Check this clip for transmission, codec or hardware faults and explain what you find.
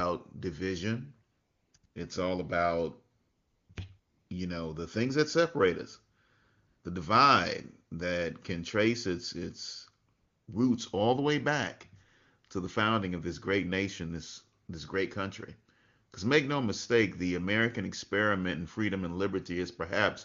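One fault kind is present: AMR comfort noise, in nine bursts between 1.31 s and 14.67 s, heard through the AMR wideband (HD Voice) codec at 23.85 kbit/s, which sounds clear.

AMR comfort noise: Pauses of 20 to 500 ms, clustered near 1.3 to 4.3 s and then at 6.67 s, 10.13 s and 14.65 s, are replaced with synthetic noise. The longest comes at 3.19 s, after "all about" and before "you know the things", and the last one falls between "this great nation this" and "this great country". The phone treated these moments as silence and stopped sending speech frames, so the receiver generated noise from a rough level and spectrum description. The real background becomes a smooth, steady hiss that switches in and out. On a spectrogram these patches appear as flat, featureless bands with hard edges. On the waveform they look like even, low-level fill.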